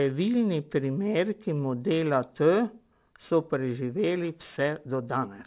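Speech throughout carries aliasing: downsampled to 8 kHz without a filter, energy above 4 kHz folds back as gritty, unrelated tones, unlike band-limiting's clean dullness.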